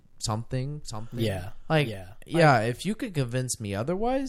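From 0.82 s to 2.88 s, the speech is joined by a second copy of itself. This is a doubled audio track. The copy trails the original by roughly 0.7 s and sits about 10 dB lower. It is full-band and dry, with no decay or room colour. It appears and vanishes abruptly at those points. The cause is likely a second capture through a slower path, or an edit holding two unaligned copies.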